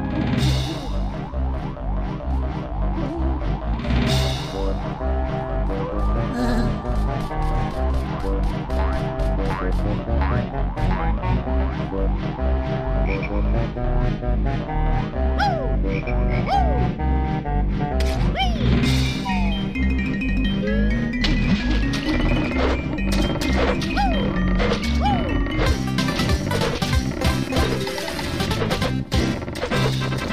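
No technical faults are audible.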